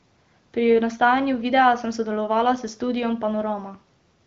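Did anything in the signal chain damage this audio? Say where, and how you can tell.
No, nothing in the chain damaged this speech; it has simply passed through the AMR wideband (HD Voice) codec, which you can hear in how the top end stops near 7.2 kHz, and the speech stays clear rather than raspy, which fits one of AMR-WB's higher rates, somewhere around 18 kbit/s.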